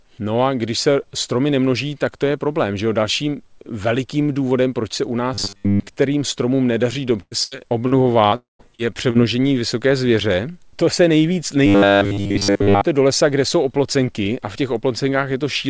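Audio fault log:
5.34–5.87 s and 11.66–12.81 s, robotic sound from repeated short buffers: after "důvodem proč se u" and again after "se nejvíc", the sound becomes a rigid, metallic buzz fixed at 100 Hz. Most of each stretch is the same tiny slice repeated, likely about 10 ms of audio replayed while fresh audio arrived too late.
7.20–8.35 s, repeated packet loss (robotic sound): after "stromům nedaří", four holes totalling about 0.28 s, the longest 0.11 s, are each patched by stretching the preceding sound. The gaps cover about a quarter of the stretch, so the audio turns choppy and mechanical.
8.36–8.62 s, long network dropout: roughly a quarter second of audio likely never arrives. The last sound is carried on briefly as a fading buzz or hiss, then about 0.16 s of near-silence follows before the audio resumes with that part missing.
8.75–8.81 s and 9.10–9.17 s, short concealed packet loss: two holes of about 40 ms each are filled by extrapolating the preceding sound and crossfading back, which leaves a brief smear or wobble at each point.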